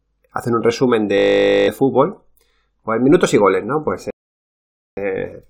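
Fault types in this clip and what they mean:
System hang loop: The computer or its audio driver froze while the sound hardware kept replaying one 20 ms buffer, 25 times over. Right after "hacen un resumen", from 1.18 to 1.68 s, the speech becomes a steady 50 Hz buzz, and about half a second of speech never arrives.
Rebuffering stall: The player used up its downloaded audio and paused until more came in. From 4.10 to 4.97 s the speech cuts to silence, then picks up exactly where it left off, adding about 0.87 s of dead air without losing anything.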